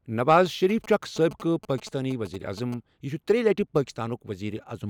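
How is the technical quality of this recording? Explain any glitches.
The recording has one clear interference fault over the speech. From 0.38 to 2.74 s there are GSM signalling bursts: a nearby 2G phone's radio pulses are rectified by the audio circuit, giving a galloping dit-dit pattern of short 217 Hz buzzes, roughly 20 dB below the speech. Unlike steady mains hum, it arrives in short clusters.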